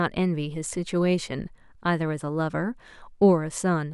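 The speech recording carries no audible technical faults: the signal holds steady throughout, with nothing breaking into or disturbing it at any point.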